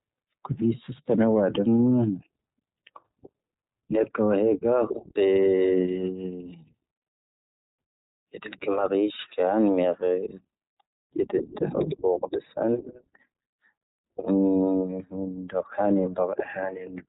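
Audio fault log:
throughout, iLBC codec: the speech is band-limited, with nothing above 3.8 kHz, so sibilants and breath lose their air. The speech carries a plainly audible roughness and a faintly synthetic edge. This is a narrowband voice codec's signature. Each short block, which fits 20 ms frames at around 15.2 kbps, has its excitation coded on its own without borrowing from the block before, so the fine detail of the voice is approximated coarsely.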